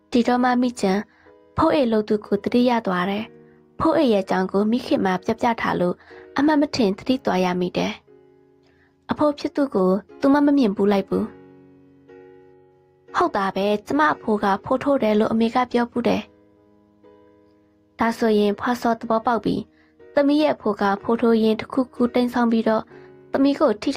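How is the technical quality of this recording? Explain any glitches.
No glitches, dropouts, clipping or other technical faults are audible anywhere in the recording.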